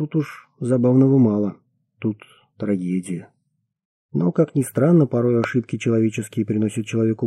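At 5.44 to 5.46 s, a sudden electrical pulse, likely from a switch, plug or static discharge, enters the chain, producing a single loud pop roughly 10 dB above the surrounding sound.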